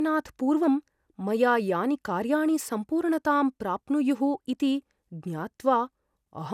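From start to finish the speech has a swirly, hollow quality, with consonant attacks smeared rather than crisp, and nothing comes through above about 17.2 kHz. That's generation loss, and the likely cause is the audio going through a lossy codec several times over, something like five passes of MP2 at around 128 kbit/s. Each re-encode quantises on a shifted frame grid, so the noise and spectral gaps keep piling up.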